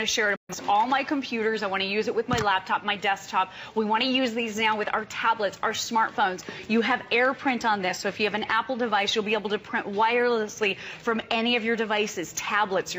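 At 0.36 s the receiver stopped getting usable frames, either because the digital signal was lost or because frames failed their error check, and it muted until clean data resumed. That is a digital broadcast dropout. The sound fades out over about 8 ms, then a hole of roughly 128 ms opens before it returns at 0.55 s. That gap fits about three missing frames, and whatever was sent during it is simply gone.

At 4.18 s the stream likely lost a tiny stretch of samples, roughly a single sample or about 0.02 ms, so the waveform jumps straight from one value to a later one with nothing in between. These dropped samples remove no audible sound. The discontinuity is heard as one sharp, isolated click, which shows up as a thin vertical line running across the spectrum.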